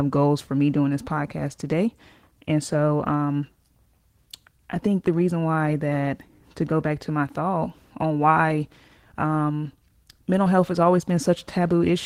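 Repeated timing corrections run from 0.26 s to 11.93 s of this speech clip: the receiver keeps trimming short slices out of the stream so it can keep pace with material arriving too quickly, and the net effect is playback at 104 percent speed. The cuts all go the same way but land at uneven spacing, so where they are heard they come through as small hiccups and a slightly hurried, unsteady tempo rather than as one clear glitch.

Clock drift between sender and receiver underlies this and persists through the whole recording. The sending device's audio clock runs roughly 4 percent fast relative to the receiving side, so the receiver's jitter buffer keeps filling beyond its target level. Rather than let the delay grow without limit, the receiver discards bits of audio as it goes, which is exactly what produces the recurring, irregular timing edits across the clip.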